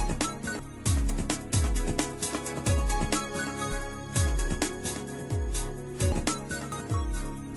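At 0.59 s there's a quick glitch from damaged data in the compressed stream: bad bytes throw the decoder off, it loses sync and hunts for the next frame header, leaving a small blip. At 1.1 s and again at 2.66 s there's a jump of roughly 20 ms, likely a dropped buffer (overrun), where samples got overwritten before the program read them and the two sides were butted together. The same corrupted-stream glitch returns at 3.72 s and 6.12 s. Then at 6.72 s there's a bigger skip, likely another overrun, around 70 ms gone, so the jump forward there is larger.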